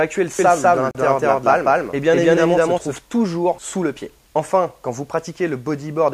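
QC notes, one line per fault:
0.39 to 2.99 s, doubled audio track. A second copy of the sound runs alongside the first, trailing it by about a fifth of a second. It sits at roughly the same level as the original. It carries the full frequency range and has no decay or room colour, so it reads as a clean, discrete echo rather than reverb. It cuts in and out abruptly at both ends. The likely cause is the signal being captured twice, once through a slower path.
0.91 to 0.95 s, gap at a join of encoded pieces. A 36.8 ms gap opens in the sound, then it resumes exactly where it stopped. The codec smears the edges, so the silent part is shorter than the gap. This fits two separately encoded segments joined without trimming. The encoder's start-up delay and the padding on the last frame were both left in place, and they leave this short hole in otherwise continuous audio.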